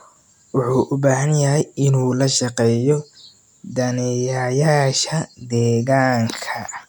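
No technical faults can be heard anywhere in the recording.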